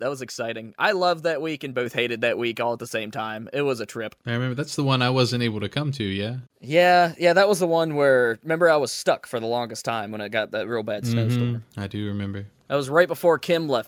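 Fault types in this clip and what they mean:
Microphone volume stepped up: at 1.86 s the speech and the background noise both jump by about 4 dB at once, because the microphone's input gain was raised in a single step by the call software reacting to a quiet input level.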